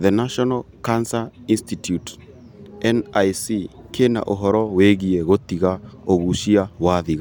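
The speech in this recording carries no audible technical fault at any point.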